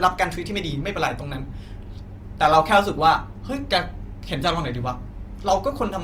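Opus compression runs through the whole clip, likely from a low-rate encode in its music mode, which fits roughly 24 kbps. Band energies survive while starved bands get filled with folded or noise content, so the speech sounds rough and grainy, though the bandwidth stays full up to about 20.2 kHz.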